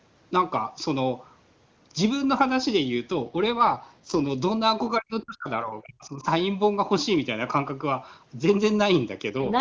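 From 3.11 to 4.28 s an AMR rate drop occurs: the network pushes the wideband codec down to a lower mode and spends the freed bits on error protection. The sound turns rougher and more synthetic with no gap or narrowing, which fits a fall from 23.85 to 8.85 kbit/s. From 4.99 to 6.25 s the speech is suppressed in double talk, likely because the echo canceller mistook the talker for loudspeaker echo during simultaneous speech. The voice dips by up to about 40 dB, affected for about a second in total. At 9.29 to 9.60 s the same rate drop recurs, bringing back the brief raspy, synthetic texture.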